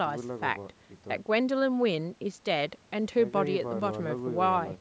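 Nothing stood out on listening to this speech; the lack of content above 8 kHz and the trimmed lowest bass are simply the normal result of the call's microphone processing.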